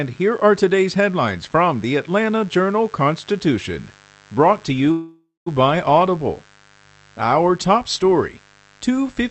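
A mains buzz runs under the speech for the whole clip, sitting roughly 30 dB below it. Its harmonics stack up on a 50 Hz fundamental, and their spacing and reach point to sharp switching spikes entering twice per mains cycle, from a dimmer, a rectifier or an unshielded run. Those spikes give it a raspy, edged character rather than a smooth hum, and the buzz stays constant in level throughout.

From 4.91 s to 5.48 s there is a call audio freeze, most likely caused by packets stalling in transit so the jitter buffer ran dry. For about 550 ms the receiver fills the gap, sustaining the last sound as a fading tail that drops to about 160 ms of silence before the speech resumes. Nothing is lost. The audio picks up exactly where it stopped, so everything after this point arrives 550 ms later than it would have.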